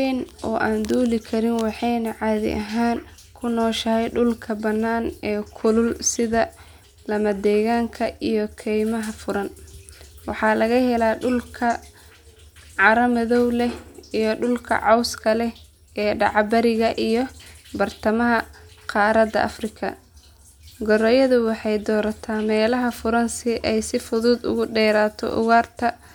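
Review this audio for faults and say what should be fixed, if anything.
Nothing here needs fixing; no faults were heard.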